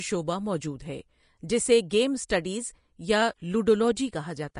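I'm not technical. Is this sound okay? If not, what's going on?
No. Vorbis compression is audible throughout the whole speech clip, from start to finish. The sound is likely the result of saving it with the Vorbis codec at a low quality setting. The codec throws away everything above about 10.6 kHz, so the top sparkle is gone, and it stores the remaining treble so roughly that fine detail turns into a hissy, grainy texture, roughening the voice and softening sharp consonants.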